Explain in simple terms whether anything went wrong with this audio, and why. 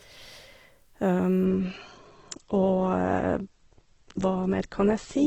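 Something does go wrong. From 1.45 s until the end, the speech suddenly loses its crispness. This is an adaptive stream at a lower bitrate. The connection slowed, so the player switched to a smaller, more squeezed version of the audio. Nothing above 8.2 kHz survives, so hissy sounds turn dull. The squeezing also leaves an artificial, smeared edge. The change is abrupt, but the sound never stops.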